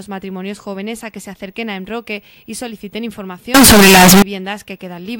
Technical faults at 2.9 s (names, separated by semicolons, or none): none